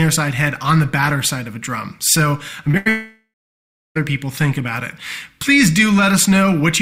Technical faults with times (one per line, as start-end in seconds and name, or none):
2.71-2.75 short concealed packet loss
2.77-2.87 burst of packet loss
2.89-3.97 long network dropout